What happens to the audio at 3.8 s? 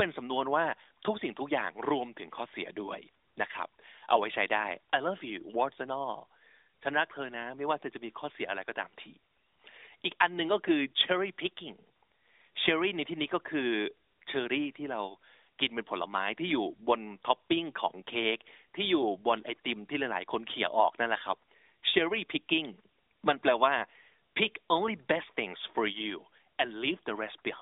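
Nothing goes wrong at 3.8 s: the audio is intact there, heard through the AMR narrowband mobile codec's band-limited sound with nothing above 3.8 kHz.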